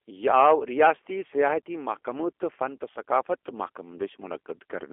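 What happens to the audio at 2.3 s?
At 2.3 s, as across the whole clip, the G.729 codec shows: speech rebuilt from a filter and sparse pulses sounds rough and synthetic, squeezed into 300 Hz to 3.4 kHz.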